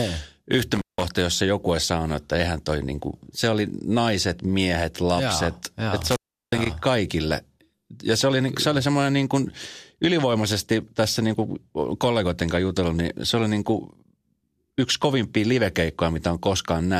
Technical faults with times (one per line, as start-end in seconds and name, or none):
0.75-1.05 intermittent contact
6.01-6.66 intermittent contact